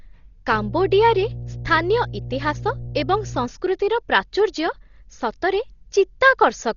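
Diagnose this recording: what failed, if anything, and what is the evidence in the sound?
Mains hum enters at the analogue wiring stage, from 0.49 s to 3.48 s: a steady 60 Hz tone sitting roughly 10 dB under the speech. A ground loop or nearby transformer couples the power line in. A spectrogram shows a bright horizontal line at 60 Hz between those times.

The codec stage shows heavy damage throughout, with nothing above 7 kHz and a dull, rough, fluttering texture around the speech, likely from Dolby Digital compression at a rate that fits 32 kbps. Starved frequency lines get dither noise. A spectrogram shows a hard ceiling with speckled, grainy harmonics.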